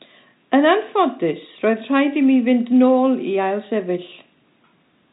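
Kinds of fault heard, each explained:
No faults can be heard in this speech, which sits within a narrow telephone-style band with nothing above 3.8 kHz and shows at most a faint trace of its coding.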